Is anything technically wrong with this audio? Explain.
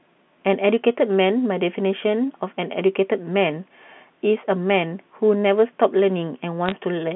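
Yes. From 6.66 to 6.72 s there are bit errors on a digital phone line: roughly one bit in two hundred flipped on the G.711 A-law path, corrupting individual samples, which crackle as sharp ticks over the speech.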